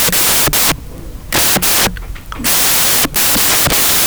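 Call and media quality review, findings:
Samples built from the wrong bytes, throughout. Symptom: loud, harsh broadband noise over the whole clip, close to white on louder speech. Probable component: decoder or file reader byte handling. Mechanism: sample bytes reassembled with the wrong order or a one-byte offset, so noisy low-order bits land in the high-order position and dominate every value.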